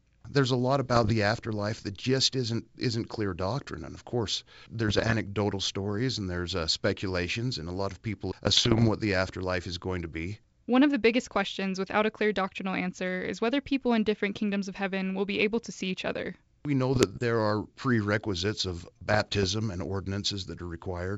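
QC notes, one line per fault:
0.87–1.13 s, 4.88–5.15 s, 8.46–8.89 s, 16.93–17.20 s, 19.09–19.47 s: bit errors on an ADPCM link. Bits are flipped at a rate of roughly half a percent to one percent in each burst. Each wrong bit also corrupts the decoder's step size and predictor, so the fault carries on for some milliseconds. The result is pops and rough, gritty bursts with brief jumps in level. The longest burst runs about 0.43 s, inside G.722 wideband coding whose upper band carries a light hiss.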